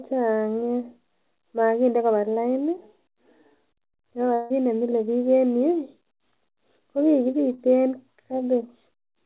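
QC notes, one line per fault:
4.34–4.52 s, long network dropout: For about 0.16 s the sound is replaced by a smeared continuation of what came just before, as a buzz or hiss. It fades but never reaches silence. The likely cause is a stall in arriving audio, with the receiver padding the gap until playback resumed.
7.54–7.60 s, short concealed packet loss: A 40 ms gap was filled by stretching the preceding sound and then blending back into the real signal. It is heard as a brief smear or wobble within audio that stops at 4 kHz through the call codec.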